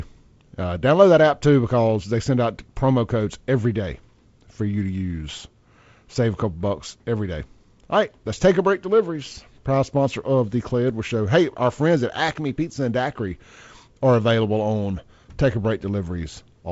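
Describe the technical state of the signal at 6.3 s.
At 6.3 s the speech is intact, with no dropout, click or distortion, only the normal band limit of G.722 wideband telephone coding leaving nothing above about 7.7 kHz.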